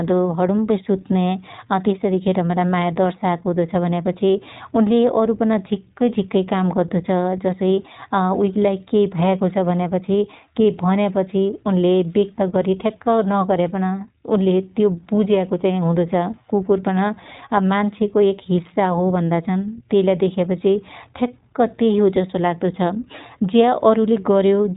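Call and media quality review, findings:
iLBC codec throughout. Speech band-limited, nothing above 4 kHz. Plainly audible rough, slightly synthetic timbre. Decoder codes each frame's excitation independently. Sound fits 20 ms frames at the 15.2 kbps iLBC mode. Likely component: narrowband VoIP codec leg.

Lost iLBC frames, 12.36 to 12.40 s. Short held, buzzy vowel-like sound, about 20 ms. Fits a single lost packet. Decoder concealment repeats the last pitch cycle mixed with noise. Frames stand alone, so speech recovers immediately.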